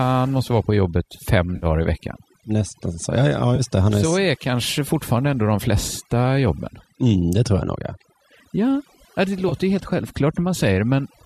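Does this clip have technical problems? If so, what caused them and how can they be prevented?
Yes. Overdone noise removal runs throughout: an aggressive reducer cuts bands near its noise estimate, leaving a lowered background with twinkling specks. Prevent it by using gentler reduction strength or a higher noise floor.

AAC frame loss with concealment occurs at 1.56–1.66 s, between "måste vara på jobbet" and "i veckan", then at 3.56–3.61 s and at 9.49–9.54 s, just before "ju helt". The decoder patched the missing frames from the last good spectrum, producing brief smeared, phasey gaps. The span lengths fit a few short low-delay frames, likely from the AAC-ELD stream. Prevent these dropouts with forward error correction, jitter buffering or a more reliable network path.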